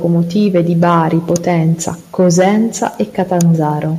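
Nothing technical goes wrong anywhere in this bit of speech, so there's no fault to point to at any moment.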